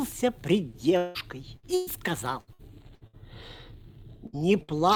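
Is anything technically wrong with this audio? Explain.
Yes, the stream loses audio several times.

From 0.97 to 1.18 s there is a likely long network dropout: about 180 ms never arrived, and the receiver bridged the whole hole by extending the preceding sound, so a fading buzz or hiss fills it with no silence before the audio jumps ahead.

At 1.57 to 1.66 s, 1.75 to 1.90 s, 4.27 to 4.36 s and 4.63 to 4.71 s, a burst of packet loss removes about 60 ms, 120 ms, 60 ms and 60 ms. Each gap is patched by continuing and fading the last sound, then playback resumes past the missing piece.

From 2.41 to 3.16 s, repeated packet loss causes robotic sound. Four separate gaps, the longest 63 ms, drop about 240 ms in total. Concealment covers roughly a third of that stretch, so the sound turns choppy.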